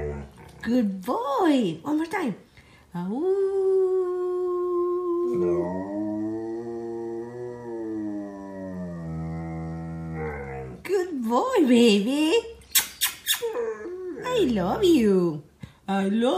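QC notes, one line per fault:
No faults heard anywhere in this clip.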